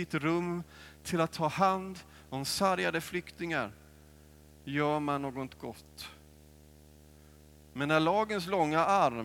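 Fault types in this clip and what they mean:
Video or display buzz: a screen or its video cable is leaking into the audio path, so a buzz at 75 Hz, the display's field rate, runs under the speech the whole way through, with a gritty hash riding on top, sitting roughly 25 dB below the speech.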